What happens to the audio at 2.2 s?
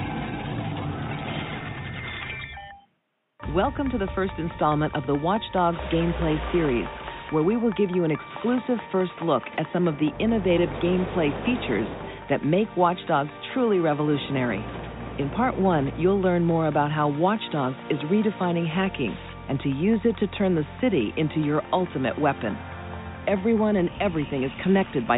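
Nothing goes wrong at 2.2 s; the audio plays through that moment intact, with no dropout, click or other fault.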